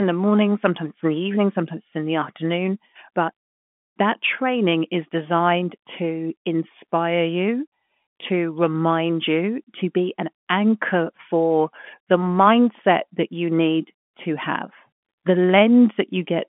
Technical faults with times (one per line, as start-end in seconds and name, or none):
none